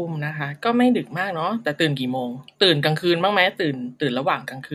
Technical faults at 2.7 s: none

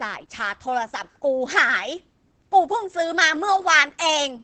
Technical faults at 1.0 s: Opus voice compression

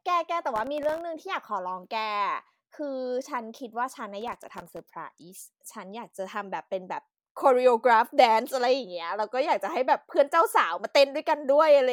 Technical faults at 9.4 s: none

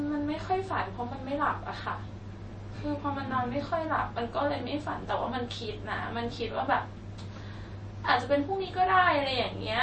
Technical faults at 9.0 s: MP3 compression

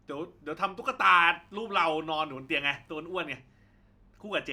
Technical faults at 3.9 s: none

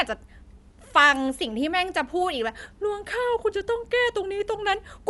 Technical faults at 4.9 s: Dolby Digital compression

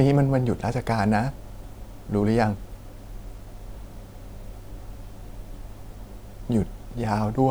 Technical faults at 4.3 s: none

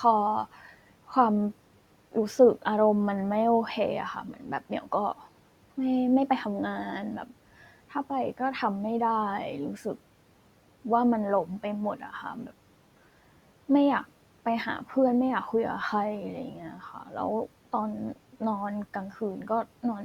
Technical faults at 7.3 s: none

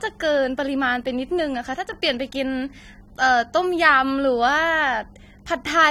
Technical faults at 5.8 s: AAC compression

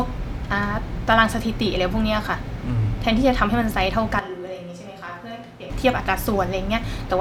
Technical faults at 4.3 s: switch to a distant microphone

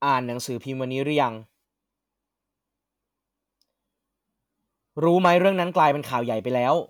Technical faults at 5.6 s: none

